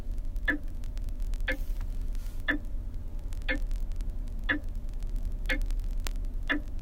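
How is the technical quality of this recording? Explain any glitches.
The technical quality is poor, because a steady fault runs through almost the whole recording. Word clock ticks appear from 0.12 s to 6.79 s, roughly every 20 ms, about 300 in all. The receiver's clock drifts around 1000 ppm from the sender's, so a single sample slips repeatedly. The result is a sharp, buzzy ticking of uneven strength.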